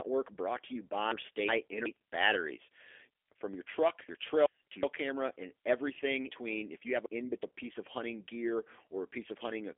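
G.729 codec damage runs through the whole recording: nothing above 3.6 kHz survives and the speech sounds rough and synthetic, consistent with an 8 kbit/s model-based voice codec. Chunks out of order from 4.09 to 4.83 s, between "your truck" and "camera and everything": two 0.37 s pieces play swapped, producing a jumbled moment.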